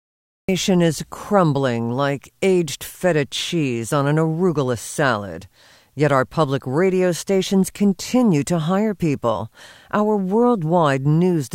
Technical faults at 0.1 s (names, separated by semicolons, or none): cut-off start